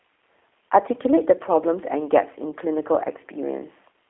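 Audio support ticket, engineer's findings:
G.729 codec throughout: speech band-limited to roughly 300 Hz–3.4 kHz, nothing above 3.8 kHz; plainly rough, synthetic texture from pulse-excited vocal tract resynthesis, consistent with 8 kbit/s G.729A.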